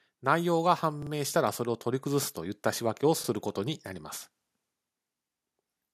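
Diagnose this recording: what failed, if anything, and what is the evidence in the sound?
The call processing stage has an automatic gain rising problem. From 0.05 s to about 3.87 s the level climbs steadily by about 7 dB, and the background noise comes up with the voice rather than staying put. That shared swell is the giveaway: the gain control decided the input was too quiet and kept turning it up over several seconds, instead of the talker simply getting louder.

There is also a repeated buffer fault at the driver or buffer stage. At 1.02 to 1.11 s a short chunk plays three times back to back, so you get a quick stutter with hard joins. At 3.24 to 3.29 s and 5.04 to 5.08 s a chunk plays twice. Each repeat is about 43 ms, which fits a 2048-sample buffer. New audio didn't arrive in time, so the device replayed its last buffer. Nothing seems to be skipped, so the stream is delayed rather than cut.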